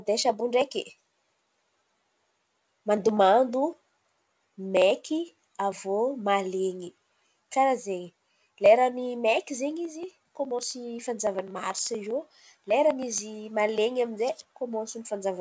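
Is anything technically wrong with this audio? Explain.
No, nothing technically wrong turns up in this speech.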